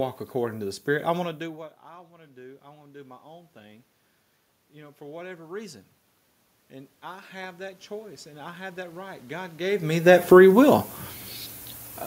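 Low bit depth with noise shaping runs throughout. The speech sits on only nine bits, with the rounding error pushed upward, giving a thin hiss roughly 30 dB down. From 1.22 to 3.90 s, automatic gain rising follows a 24 dB input drop after the talker moves back, lifting voice and room noise by about 5 dB. From 6.69 to 10.79 s it rises again, by about 7 dB.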